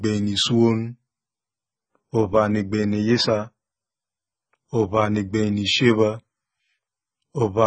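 From start to finish, the speech carries AAC compression damage. Nothing is heard above 9 kHz, so the top end is dull and closed in. The damage is heavy. Sibilants turn fizzy and smeared, and sustained sounds warble. This is likely an AAC-LC encoder starved of bits. It quantises each frame's frequency lines coarsely, lowers the cut-off and leaves gaps across the spectrum. The texture fits a bitrate near 16 kbps.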